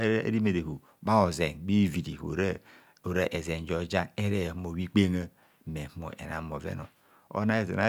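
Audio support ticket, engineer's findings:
No faults found on listening; speech path behaves as expected, no dropouts, clicks, distortion or timing issues heard.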